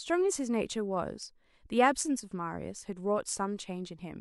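A speech recording with nothing technically wrong to point to.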